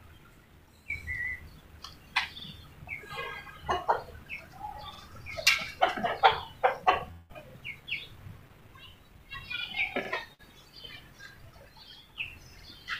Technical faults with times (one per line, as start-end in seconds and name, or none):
2.40-2.45 overlapping chunks
4.95-5.00 overlapping chunks
7.11-7.31 long network dropout
7.50-7.55 overlapping chunks
10.05-10.10 overlapping chunks
10.33-10.41 burst of packet loss
12.60-12.65 overlapping chunks